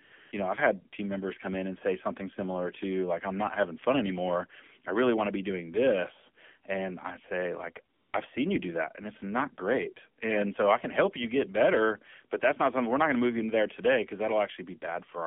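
Throughout, the speech sounds thin, buzzy and synthetic, confined to roughly 200 Hz to 3.4 kHz: AMR narrowband mobile codec damage, plainly audible, consistent with a low rate around 7.4 kbps.

From 0.04 to 0.12 s, 0.16 to 0.32 s, and 7.94 to 8.14 s (between "and I say like" and "I've seen you do"), the background turns into smooth, steady hiss that switches in and out. This is AMR comfort noise, synthetic filler inserted where speech frames stopped.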